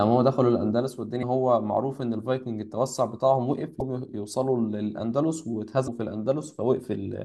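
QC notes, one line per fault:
1.19–1.23 s, 3.78–3.82 s and 5.84–5.88 s: damaged data in a compressed stream. Each is a brief glitch, about 44 ms long, cutting into the speech as a short blip. Some bytes in the compressed stream were wrong at those spots, so the decoder couldn't make sense of the frames there, lost its footing and had to hunt for the next valid frame header before picking the speech back up.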